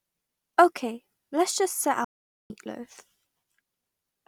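At 2.04 s, right after "let's just set", the speech halts abruptly in mid-flow and the output stays silent for about 0.45 s until 2.50 s. This playback stall likely comes from the player running short of data or being blocked. Unlike a brief dropout, it is a single sustained silence before the audio resumes.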